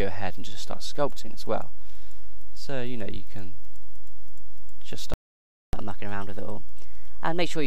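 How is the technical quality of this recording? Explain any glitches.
The recording has two linked glitches near the end: a playback stall followed by a catch-up at higher speed.

From 5.14 to 5.73 s there is a playback stall. The player likely ran out of data, or its playback thread was blocked, so output went silent. The sound cuts off mid-flow for about 0.59 s before it resumes.

From 5.73 s to the end there is catch-up at higher speed. To work off the backlog from the stall, the player resamples the audio, running it at 1.1 times normal speed. Everything plays faster and sits about a semitone and a half higher, and it stays that way until the clip ends.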